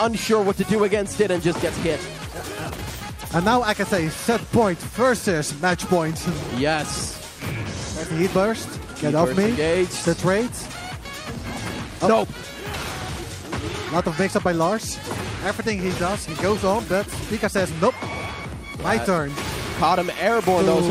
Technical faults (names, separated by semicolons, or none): none